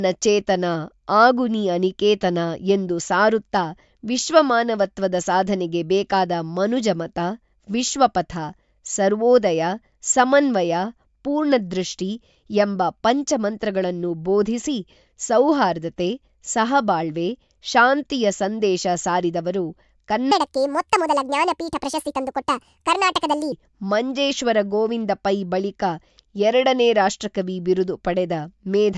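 From 20.31 s to 23.52 s the speech suddenly runs fast and sounds high-pitched, the classic wrong sample rate fault. The samples are being clocked out faster than they were captured, with no resampling, so speed and pitch rise together: 1.5 times faster and about 7 semitones higher. That ratio fits 16 kHz material played back at 24 kHz. Normal pitch and pace return just before "ಮಂಜೇಶ್ವರ ಗೋವಿಂದ ಪೈ ಬಳಿಕ".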